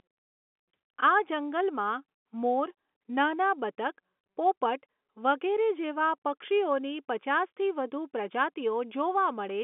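No technical faults can be heard in this speech recording. It carries the narrow band of G.711 telephone coding, with the sound sitting roughly between 200 Hz and 3.5 kHz and nothing above 3.8 kHz.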